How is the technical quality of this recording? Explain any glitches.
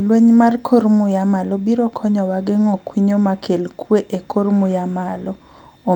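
No glitches or faults are audible.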